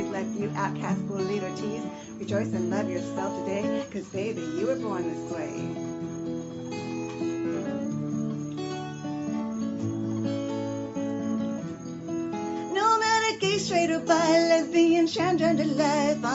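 No technical faults can be heard in the audio. The call path's band limit is audible, with nothing above about 8 kHz, which fits a wideband Opus call.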